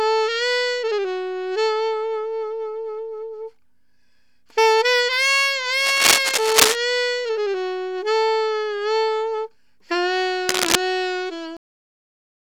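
Cable scratch noise appears from 5.80 to 6.76 s and again from 10.49 to 10.75 s: dense, ragged bursts of scratching laid over the sound, the first rising somewhat above it and the second at roughly its level, likely from a worn cable or connector whose contact resistance jumps as it moves. A cut-off end follows at 11.57 s, where the audio stops mid-sound and drops straight into digital silence with no decay, because the final stretch of audio was never written out or played.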